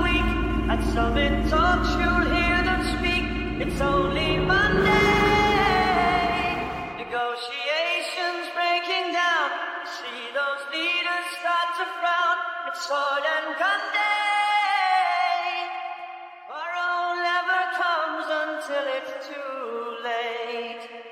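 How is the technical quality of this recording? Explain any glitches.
No technical glitches can be heard anywhere in the recording. Nothing interrupts or disturbs the audio at any point.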